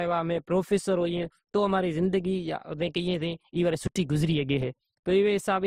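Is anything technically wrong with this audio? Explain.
Yes. Throughout, the speech has two layers of compression smearing and nothing above 15.8 kHz, likely from transcoding between lossy codecs: MP3, then Opus re-encoding those artefacts.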